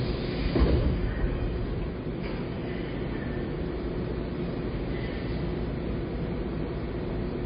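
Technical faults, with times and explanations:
Throughout: low-bitrate audio saved at a high bitrate. The sound stops dead at 5 kHz and has a dull, smeared MP3 character, likely from an earlier encode near 24 kbit/s later re-saved at a higher rate, which cannot restore what was removed.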